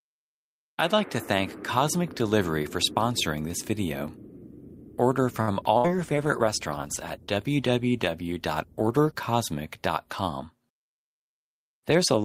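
At 5.41 s a late packet left the jitter buffer empty, so the receiver stretched the last sound for about 63 ms. This short stall from a late packet holds the sound too long, but nothing is lost.

From 5.78 to 5.90 s, a burst of packet loss dropped about 60 ms of audio. Concealment carried the last sound forward as a fading buzz or hiss, then playback resumed further on.

Starting at 5.83 s, a call bitrate drop cut the encoder from 64 to 21 kbps, staying at its lowest for about 3.3 s. The sound turns coarse and muffled until 9.27 s.

From 10.66 to 11.99 s, the jitter buffer held too much audio. This jitter buffer speed-up trimmed roughly 70 ms in small pieces, so the sound runs about 5% fast at unchanged pitch.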